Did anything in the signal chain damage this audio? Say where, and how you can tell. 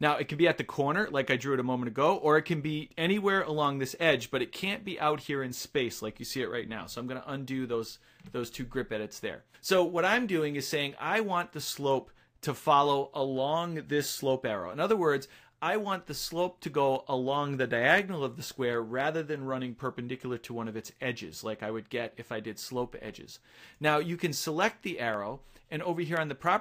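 Yes, at the USB or driver stage: periodic USB or driver dropouts. Ticks recur every 1.02 s from 0.58 s to 26.17 s, around thirty in all. Each time the bus or driver stalls, a tiny fraction of a millisecond of audio is skipped, and the splice clicks.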